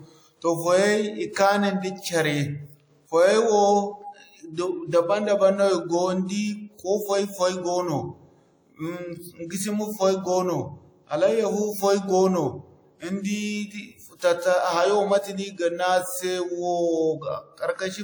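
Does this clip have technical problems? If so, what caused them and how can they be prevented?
Yes. The whole speech clip carries plainly audible codec damage: a swirly, smeared quality with hiss that swells and fades along with the voice. That points to WMA compression as the likely cause, at a rate that fits something like 48 kbps. A transform coder like this spreads its rounding noise over long blocks and drops weaker spectral detail when bits run short, although the band still reaches about 20.1 kHz. To prevent it, record and deliver in a lossless format, or at least encode at a much higher bitrate.

There's also pre-echo in two places: a burst of hiss from 1.33 to 1.36 s, about 36 ms long, and another from 4.53 to 4.57 s, about 41 ms long, each smearing the sharp onset that follows. The codec spreads its noise evenly across a whole block, so when an attack lands late in one, noise meant for the loud part leaks into the quiet just before it. 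To prevent it, use an encoder that switches to short blocks on transients, or avoid low-bitrate transform coding altogether.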